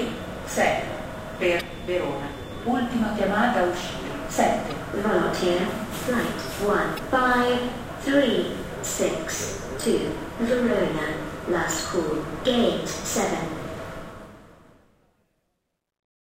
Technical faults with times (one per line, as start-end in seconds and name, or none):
1.57-1.61 damaged data in a compressed stream
4.70-4.72 damaged data in a compressed stream
6.95-6.99 damaged data in a compressed stream
13.91-16.26 truncation distortion on a fade